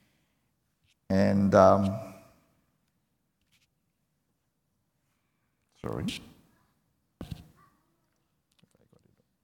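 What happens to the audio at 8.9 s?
Nothing goes wrong at 8.9 s; the audio plays through that moment intact, with no dropout, click or distortion.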